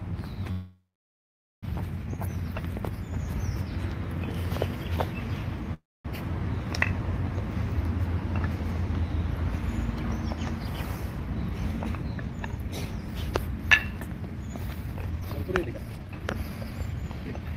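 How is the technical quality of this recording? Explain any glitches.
The recording has two call audio freezes and two stretches of jitter buffer speed-up.

Call audio freezes at 0.51 to 1.65 s and 5.74 to 6.07 s: the sound smears into a fading tail, then silence for about 0.84 s and 0.24 s. Delayed packets likely emptied the jitter buffer. Unlike a dropout, the audio resumes where it stopped, with nothing lost.

Jitter buffer speed-up at 11.20 to 13.15 s (114% speed, about 0.3 s removed) and 14.86 to 17.54 s (141%, roughly a second removed): repeated pitch-period cuts make it hurried, but pitch stays unchanged, unlike resampling.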